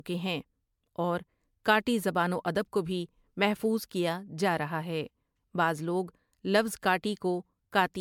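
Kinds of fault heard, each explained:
Generation loss: the speech was likely decoded and re-encoded as MP3 around five times. Each pass requantises on a shifted frame grid, so errors accumulate. It sounds more swirly, hollow and smeared than one encode at an apparent 128 kbit/s would, with blurred attacks.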